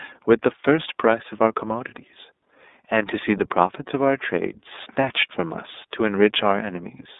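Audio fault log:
Throughout, iLBC codec: the speech is band-limited to roughly 250 Hz to 3.7 kHz, with a plainly audible rough, synthetic edge. That fits 30 ms frames coded independently at about 13.33 kbps. A spectrogram shows a hard ceiling near 3.7 kHz, with empty bands above it.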